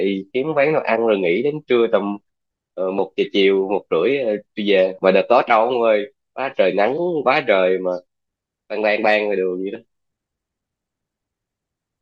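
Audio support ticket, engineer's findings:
Listened to the whole speech clip and found nothing to flag, so no fault to log on this one.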